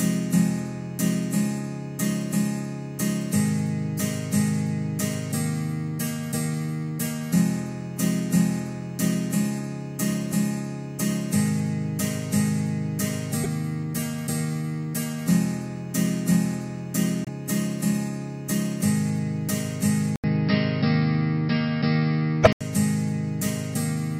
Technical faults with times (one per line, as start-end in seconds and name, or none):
13.43-13.46 broken MP3 bit reservoir
17.25-17.29 broken MP3 bit reservoir
20.16-22.61 input switched to a poorer device
22.43-22.47 broken MP3 bit reservoir